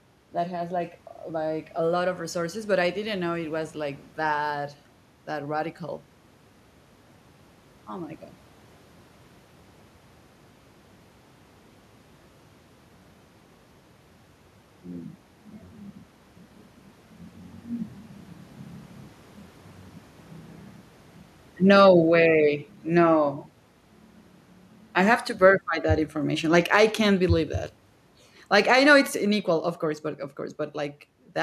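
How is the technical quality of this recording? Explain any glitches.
The speech has two episodes of automatic gain falling. From 21.56 to 23.4 s, and again from 24.92 to 29.76 s just before "course but of", the gain control judges the input too loud, or its background noise too strong, and lowers its gain gradually, by about 4 dB and then about 6 dB. The voice and the room noise sink together. The level shift around 15 s is the talker moving relative to the microphone, not the gain control.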